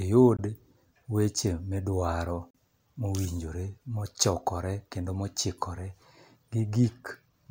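Speech with two brief silent holes, at 0.37–0.39 s and 2.51–2.55 s (about 19 and 37 ms lost), which fit one and two missed packets, likely Bluetooth dropouts; each shows as a sharp-edged vertical gap in the spectrogram and waveform.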